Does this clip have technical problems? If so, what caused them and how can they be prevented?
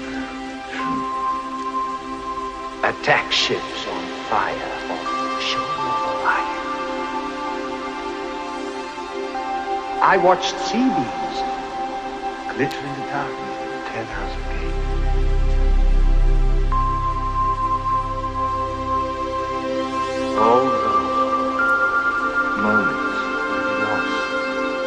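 Yes. Two sharp snaps sit on top of the sound, a louder one at 12.71 s and a quieter one at 21.69 s, each lasting about a hundredth of a second. They are likely electrical switching spikes, where a nearby switch, motor or static discharge arcs and the audio line picks up the burst. Keeping cables away from switching equipment, using balanced and shielded connections, and powering audio gear from a clean, separate circuit prevents this.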